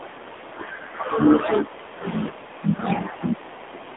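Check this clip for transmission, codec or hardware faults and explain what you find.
The clip shows one fault, present throughout: AMR narrowband mobile codec. The speech sounds buzzy and synthetic, with a muffled, telephone-like band of roughly 250 Hz to 3.6 kHz and nothing above 3.8 kHz. The codec drives a vocal tract model with a pitch predictor and a few pulses per 5 ms, and the plainly audible damage fits a low rate of about 7.4 kbps.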